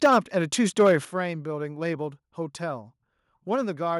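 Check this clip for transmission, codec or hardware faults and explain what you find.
Two faults appear in this speech: microphone overload twice and the microphone volume stepped down twice, each step landing during or just after an overloaded stretch.

Microphone overload, 0.03 to 0.19 s and 0.79 to 0.95 s: the input was likely driven past the converter's ceiling, by about 7 dB and then about 4 dB, flattening the peaks of around 7% of samples in each stretch. The tops get sliced off, giving the loudest syllables a harsh, crackly edge.

Microphone volume stepped down, 0.06 s and 1.05 s: having detected clipping, the call software likely cut the device's input gain in a single jump, about 4 dB and then about 8 dB. Voice and background drop abruptly together, so the level sinks suddenly rather than fading.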